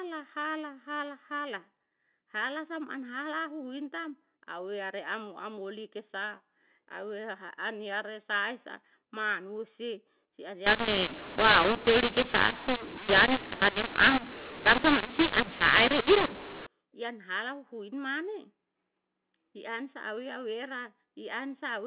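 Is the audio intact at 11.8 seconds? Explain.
No. From 10.67 to 16.67 s, mu-law and A-law are mixed up: G.711 telephone samples written as mu-law are decoded as A-law. The mismatched scale scrambles levels, so the speech sounds harsh and distorted and quiet stretches fill with noise.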